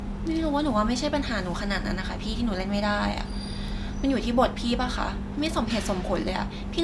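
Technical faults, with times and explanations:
No technical faults to list.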